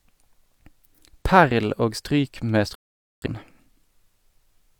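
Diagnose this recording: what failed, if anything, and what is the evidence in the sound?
A digital broadcast dropout at the reception and decoding stage. Just after "stryk med", the speech cuts to silence at 2.75 s and returns at 3.28 s, a hole of about half a second, with the muted stretch around 0.47 s. The receiver stopped getting valid frames, through signal loss or failed checksums, and muted until clean frames resumed. The gap's length fits roughly a dozen consecutive frames being discarded, and the speech sent during it is gone.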